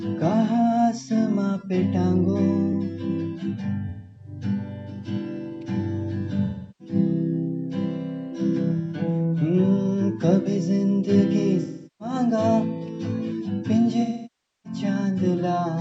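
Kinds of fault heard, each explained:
Underrun with held sample: The output buffer briefly ran dry, and the converter held its last value until fresh data arrived. At 2.73 s the waveform freezes flat for about 1.33 ms, which fits a 64-sample shortfall. No audio was dropped, so playback resumes exactly where it paused. The result is a tiny, nearly clickless stall rather than a sharp tick.
AAC frame loss with concealment: Stretches of AAC frames never reached the decoder, so it patched the holes by rebuilding sound from the last good spectrum. The lost spans are 3.89 to 4.30 s (256 ms), 6.45 to 6.94 s (341 ms), 11.62 to 12.15 s (384 ms) and 14.01 to 14.80 s (640 ms). The shorter ones come through as smeared, noisy or phasey patches where the real detail is missing, and the longest one sinks toward silence before fading back.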